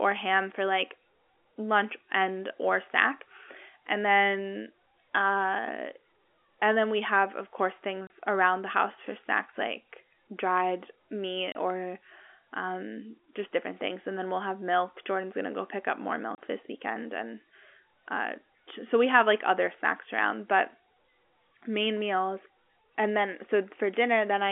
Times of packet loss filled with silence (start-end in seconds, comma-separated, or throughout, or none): 8.07-8.10, 11.52-11.55, 16.35-16.38